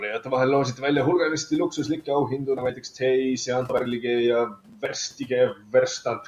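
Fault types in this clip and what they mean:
Speech cut by the noise suppressor: the suppressor mistook bits of speech for background and ducked them by about 10 to 12 dB, so parts around 0.74 s, 2.29 to 3.02 s, 4.49 to 4.83 s and 5.54 to 5.74 s sound swallowed and faint.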